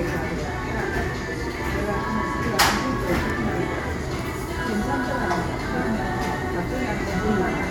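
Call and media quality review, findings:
No technical faults found in the signal: level, timing and continuity hold steady across the recording of sounds.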